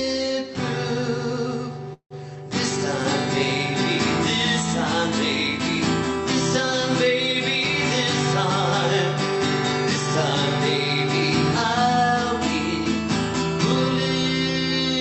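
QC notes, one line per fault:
1.93–2.13 s, call audio freeze: the sound stalls for about 171 ms. The last bit gets stretched into a buzzy tail that fades out, then roughly 90 ms of silence before things pick up exactly where they left off. Nothing is lost, but everything after runs about 171 ms late. That's likely packets held up in transit draining the jitter buffer, with the receiver padding the wait, over a call path whose top end stops around 8 kHz.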